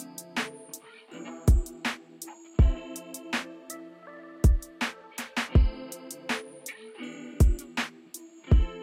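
A recording of sounds, and nothing technically amiss stood out on listening.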